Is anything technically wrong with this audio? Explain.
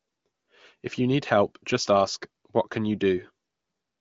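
No, nothing in this speech clip points to a technical fault. It has passed through the AMR wideband (HD Voice) codec at a rate that fits about 18.25 kbit/s, so the audio stops at about 7.5 kHz, and any coding damage is faint at most.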